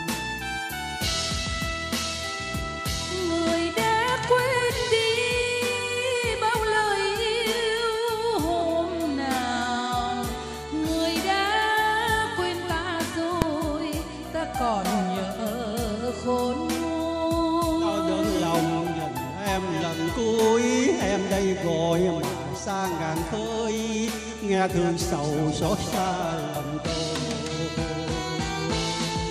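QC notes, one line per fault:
13.42 s, invalid numbers at full scale: a single sharp bang, about 1.5 ms long and consistent with a 64-sample block, where invalid values were pinned to one extreme value. Unlike an ordinary click, it sits flat at one extreme far beyond the audio's peaks, and the block is too short for any silent gap between onset and release.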